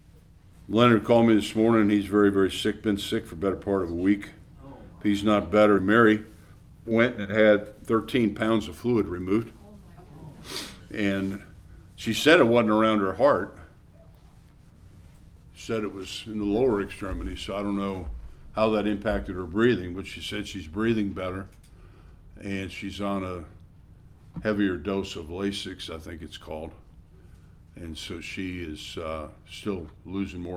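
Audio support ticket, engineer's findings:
Skip ahead at 5.77 s. About a second of audio missing, no fill; playback jumps forward and both sides butt together almost seamlessly. Probable component: receive path or jitter buffer. Backlog of later audio already queued, so the buffer discarded the stretch on overflow, or it was lost in transit, cutting latency by about a second in one step.

Jitter buffer speed-up, 5.87 s to 9.51 s. Audio runs about 9% fast at unchanged pitch; sounds rushed. Probable component: jitter buffer time-scaling. Buffer still over its target depth after the jump, so the receiver repeatedly removed short pitch-period-length pieces, roughly a third of a second in total, to drain the excess delay.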